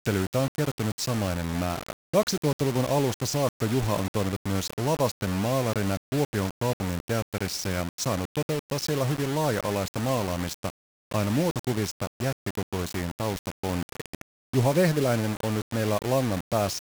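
From start to finish the speech carries a coarse, grainy distortion that rises and falls with the level of the voice, sitting only about 10 dB below the signal. Quiet passages turn gritty and the softest tails sputter between steps or cut to silence. The likely cause is low bit depth without dither: the signal appears rounded to around 4 bits, so the quantisation error tracks the waveform instead of forming a steady noise floor.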